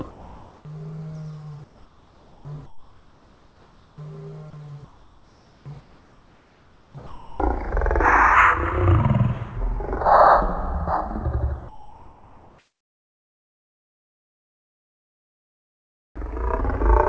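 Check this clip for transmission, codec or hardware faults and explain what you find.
Yes, there are voice-detector faults throughout, heard over a call path whose band stops at 8 kHz, consistent with a wideband call codec.

Sound dropped by the voice detector at 0.11–0.65 s, 4.50–4.53 s and 7.07–7.40 s: the detector likely judged real sound as background, so it cuts out into steady noise.

Comfort noise in place of the background at 1.64–3.98 s, 4.85–7.40 s and 11.69–16.16 s: transmission likely paused, and the receiver filled in smoother synthetic noise shaped roughly like the background. The last stretch is about 4 dB quieter than the real background.

Onset clipped by the voice detector at 16.12–16.16 s: the detector likely reacted 40 ms late, so the returning sound starts abruptly without its soft beginning.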